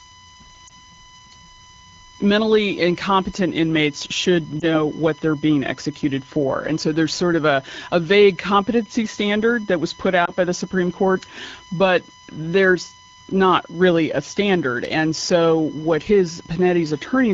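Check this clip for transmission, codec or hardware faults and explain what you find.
Two faults are present: a steady USB whine under the whole recording, and three brief dropouts from lost AMR speech frames.

USB whine runs from start to finish. Current drawn by the USB bus in 1 ms frames leaks into the audio through the power or ground, so the interference repeats at 1 kHz and climbs through its multiples. Here the strongest component sits right up at 20 kHz, with the 1 kHz fundamental below it. The result is a fixed-pitch whine, roughly 20 dB under the speech, that never changes pitch.

Lost AMR speech frames occur at 0.67 to 0.73 s, at 4.60 to 4.68 s (between "mentally incompetent inmates should" and "what they're being executed"), and at 10.25 to 10.32 s (between "standard that was put" and "by the"). Each time, a radio error corrupted one 20 ms frame so that it failed its checksum. 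The decoder then filled the gap by repeating the previous frame's pitch and vocal tract settings at reduced gain. Because only one frame is lost each time, the speech dips or warbles briefly rather than fading out, and it returns weak or rough for a moment. The wideband codec carrying the speech sounds clear, which points to a rate of around 12.65 kbit/s.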